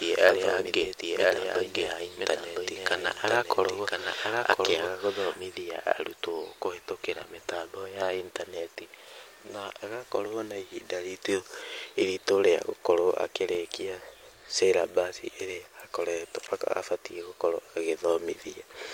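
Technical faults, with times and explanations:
0.0 to 5.4 s, doubled audio track: Already running when the clip opens, a second full-band copy of the speech trails the original by about a second, roughly 5 dB quieter. It carries no reverberant tail or room colouring, so it sounds like a flat second voice talking over the first, not an echo. It cuts off abruptly at 5.4 s. This is likely the same signal captured again through a slower path, or two copies left out of step in an edit.
0.66, 8.75, 13.55 and 16.47 s, block of digital silence: At each moment a short run of samples drops to silence, lasting 5.5, 6.4, 2.4 and 10 ms respectively. The waveform jumps to silence and back with no fade. The shortest blocks register as ticks, and even the 10 ms one at 16.47 s is short enough to be heard as a tick or dip rather than a hole. This points to the output buffer not being filled in time.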